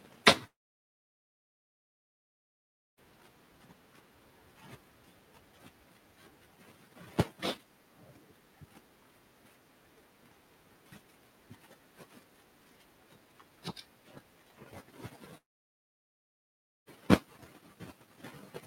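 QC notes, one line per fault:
0.47–2.99 s and 15.37–16.88 s, long network dropout: the speech cuts out, a brief buzzy continuation of the last sound fades within about 40 ms, and then there is silence for about 2.46 s and then about 1.46 s before speech resumes further on. This is likely a stall in packet delivery. The receiver tried to extend the final sound, gave up, and when audio arrived again it skipped ahead, so roughly 2.5 s and 1.5 s of speech never play.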